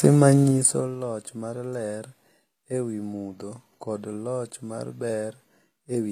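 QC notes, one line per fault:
Throughout, HE-AAC compression: the treble has that gritty, metallic edge on s sounds and nothing comes through above 15 kHz, so the top end is being rebuilt from copied lower bands rather than carried as-is. The harmonics up there don't line up with what's underneath, which is why it sounds synthetic. The damage is plainly audible and the sound fits a low bitrate, around 24 kbps, which is the likely cause.
0.40 to 0.96 s, zipper noise: the level drops by roughly 15 dB, but in hard 2 dB steps at about 15 per second instead of a smooth ramp. Each jump puts a tiny click into the waveform, and strung together they make a fast ticking zip riding on the sound while the level moves. It finishes just before "loch mar ler".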